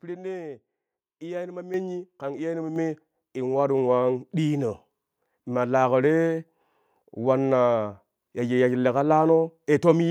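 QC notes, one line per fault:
1.74 s and 2.76 s, microphone volume stepped up: the speech and the background noise beneath it jump louder together, by about 8 dB and then about 5 dB. The call software judged the microphone too quiet and raised the device's input volume in abrupt single steps.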